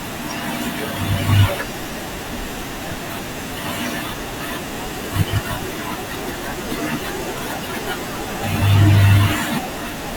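For the first 4.0 s the speech sounds dull and smeared, with thin or artificial-sounding treble and more obvious codec artefacts, before the quality jumps up suddenly with no gap. This is an adaptive stream starting at a low bitrate: the player began on a cheaper version to start quickly, which fits an Opus stream at around 32 kbit/s, then switched to a better one, consistent with about 64 kbit/s, once it had measured the connection.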